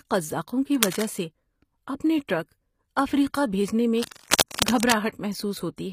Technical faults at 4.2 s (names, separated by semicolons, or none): HE-AAC compression; cable scratch noise; pre-echo